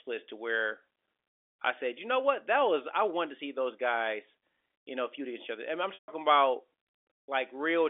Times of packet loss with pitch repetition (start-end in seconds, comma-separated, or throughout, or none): 5.94-6.08